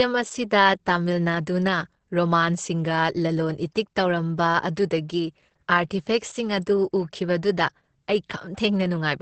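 Throughout the speech, Opus voice compression is at work. Nothing sounds above about 8.6 kHz, so the band is cut to wideband. The SILK coder codes the excitation coarsely, which fits a bitrate near 10 kbps. The voice comes out muffled, hoarse and slightly robotic.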